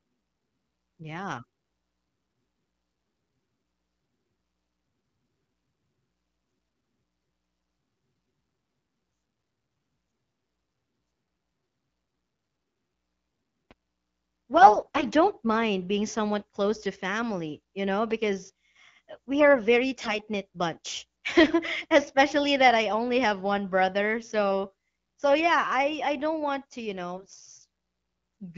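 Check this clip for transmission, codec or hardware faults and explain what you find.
Two kinds of fault appear: a pair of loud pops and three bursts of AMR bit errors, heard over wideband AMR-WB speech whose clarity fits a 12.65 kbit/s mode.

Loud pop, at 13.71–13.74 s and at 18.11–18.14 s (right after "to family you know"): a sudden voltage step, likely from a switch, plug contact or static discharge, was added to the signal. Each is a single sharp thump, about 15 dB above the speech the first time and about 5 dB the second, with the talking carrying on underneath.

AMR bit errors, at 14.58–15.04 s, 19.97–20.18 s (after "we are a very") and 27.16–27.34 s (after "don't want to you"): a weak radio link flipped the less protected bits in the frames, a few percent of them and more in the last burst. The checksum still passed, so the decoder placed its excitation pulses wrongly and misread the fine gain and spectral values. 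Pitch and level hold roughly steady, but the speech turns hoarse, scratchy and gargly for those moments.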